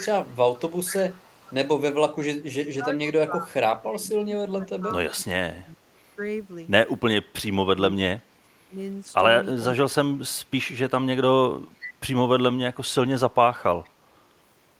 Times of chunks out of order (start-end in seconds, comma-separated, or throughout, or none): none